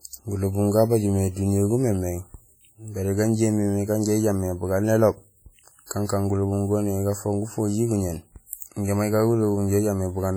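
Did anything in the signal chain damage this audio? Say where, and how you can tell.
Yes, at the codec stage, throughout the clip. It's speech, and the damage sounds like low-bitrate audio saved at a high bitrate. The band stops at about 20.1 kHz, with nothing above it, and the coding artefacts sound like a much leaner encode than the file's size suggests. That points to an early low-rate pass, likely something like WMA at 32 kbit/s, later re-saved as 320 kbit/s MP3. The big second encode just preserves whatever the first one had already thrown away.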